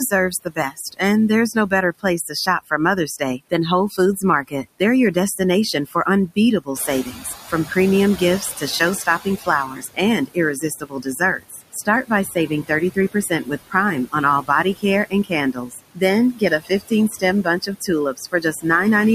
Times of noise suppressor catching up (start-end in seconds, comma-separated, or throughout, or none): 6.75-7.35